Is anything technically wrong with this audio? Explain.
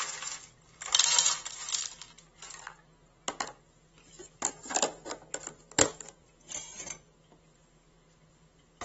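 Yes. Throughout the clip, the sound has likely passed through AAC compression at a low bitrate, consistent with roughly 24 kbps AAC-LC. The encoder discards everything above 7.7 kHz and coarsely quantises what remains, so the audio sounds plainly dull and smeared, with a warbling, fizzy texture.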